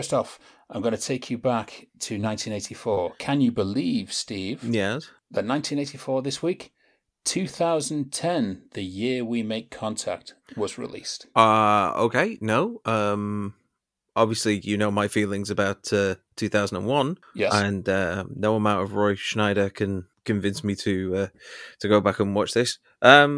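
Nothing stood out on listening to this speech recording.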